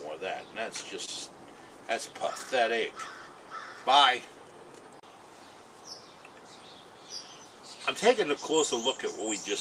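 At 1.05 to 1.09 s, short concealed packet loss: about 20 ms of audio arrived too late, and the receiver extended the preceding sound before blending back, leaving a brief smear.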